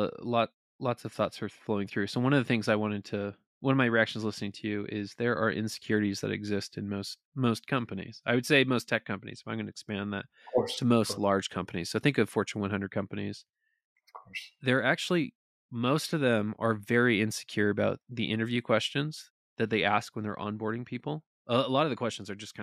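This is a speech recording, and nothing technical stands out as wrong with it anywhere.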